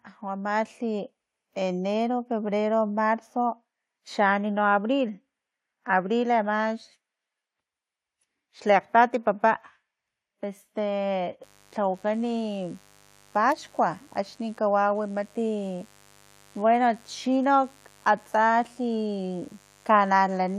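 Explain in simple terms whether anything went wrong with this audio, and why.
Automatic gain rising, from 0.21 to 2.57 s: the recorder decided the input was too quiet and slowly turned itself up, so voice and background swell together. Mains buzz, from 11.4 s to the end: electrical interference from 50 Hz power wiring leaks in as a faint, steady, raspy buzz beneath the speech.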